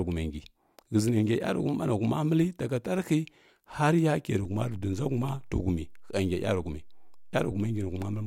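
A DC step occurs at 4.45 s in this speech recording. The waveform's zero line abruptly shifts to a new resting level, an offset of about -43 dBFS, as happens when a converter recalibrates or an input carrying a standing offset is switched in. That sudden jump is heard as a brief low thump or click, while the speech carries on unaffected. The offset then holds through to the end of the clip.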